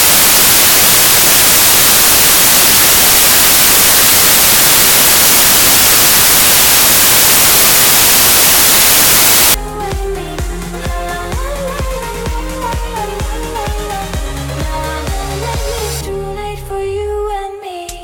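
From the very start up to about 9.54 s, you get samples built from the wrong bytes. The reader is stitching each sample's bytes together wrongly, whether from a one-byte offset, swapped byte order or a mismatched alignment, so the rapidly changing low bits end up as the big part of every value. The result is loud, harsh broadband noise over that whole stretch, close to white where the underlying sound is loud.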